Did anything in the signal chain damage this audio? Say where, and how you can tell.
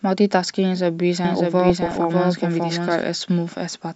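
Yes, at the codec stage, right through the clip. The speech sounds plainly dull and gurgly, with a granular edge and a top end that seems to come and go. That's MP2 compression, most likely running short of bits at something like 80 kbps. MPEG Layer II splits the signal into 32 sub-bands and rations bits between them. When bits are tight, the upper bands get dropped and what's left is quantised coarsely, which gives you that flickering, muffled texture.

There's a second stage problem, probably in the capture path or an edit. From 1.25 s to 3.03 s a doubled audio track sits under the speech: a full-band copy trailing roughly 0.7 s behind, about 5 dB quieter. It's too clean to be a room echo, with no decay and no colour, and it starts and stops abruptly at those two points. A slower second path or an out-of-step overlap of two copies would do exactly this.

On top of that, between 1.70 s and 2.04 s you get DAB burbling: short blips of noise in single sub-bands over the speech. 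That's reception-side damage. Bit errors at a fraction of a percent get past the error correction and corrupt the MP2 data, so individual sub-bands get short blips of noise. The length of the burst fits around 16 frames being hit.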